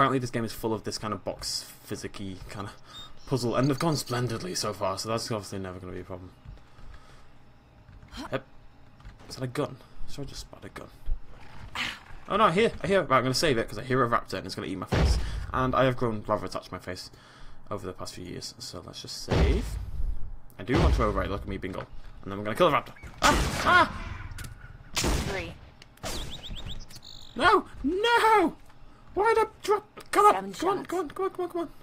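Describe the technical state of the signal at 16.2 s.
At 16.2 s the signal is intact, with no fault present at that moment.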